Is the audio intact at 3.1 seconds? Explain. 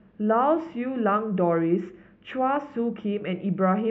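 Yes, the speech at 3.1 seconds is intact, with no dropout, click, distortion or other fault to be heard there.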